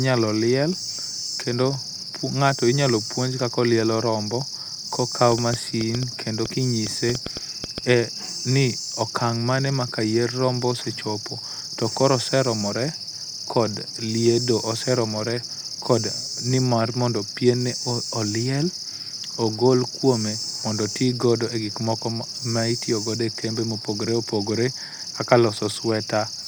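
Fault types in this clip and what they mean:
Train of clicks: from 5.32 to 7.79 s there's a run of about fifteen similar-shaped pops at roughly 5.3 per second, unevenly spaced and around 10 dB above the speech, likely from nearby equipment interference or a faulty connection or power supply injecting pulses.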